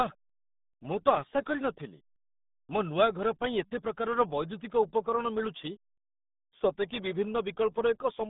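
From start to finish the speech carries the RealAudio 14.4 codec sound, the old RealAudio 1 dial-up scheme. Everything's squeezed into a phone-like band, roughly 150 Hz to 3.7 kHz, and there's simply nothing above about 3.8 kHz, so it's dull and boxy. The coding damage is heavy: with so few bits to describe the signal, the voice turns muffled and gargly, which fits a bitrate of around 8 kbit/s.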